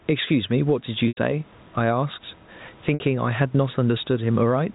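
Throughout the speech, gain pumping pulls the level down by around 10 dB under every loud syllable. The likely cause is input gain set far too high with a fast limiter pulling it back, which sets it apart from steady compression.

From 1.08 to 1.17 s, and again from 2.94 to 3.00 s, packet loss with pitch repetition repeats the last pitch period and fades it out over about 50 ms into silence, before the speech returns with a short cross-fade. This lasts 90 ms, which fits three lost 30 ms packets, and then 60 ms, which fits two. The repeated periodic tone distinguishes it from a plain silent dropout.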